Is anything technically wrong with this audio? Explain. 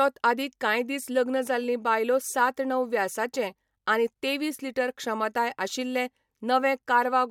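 No, nothing technically wrong stood out on listening to this speech recording.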